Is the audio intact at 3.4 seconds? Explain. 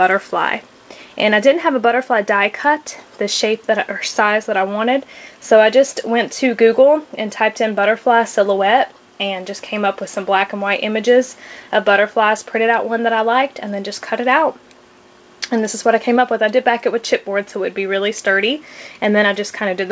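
Yes, the audio is intact at 3.4 seconds, with only the ordinary band limit of the call path's G.722 coding, which leaves nothing above 8 kHz.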